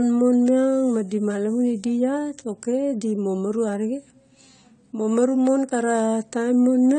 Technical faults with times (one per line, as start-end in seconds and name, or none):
0.00-6.98 AAC compression